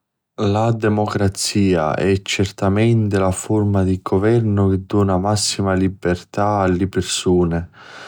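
No technical faults occur at any point in this speech.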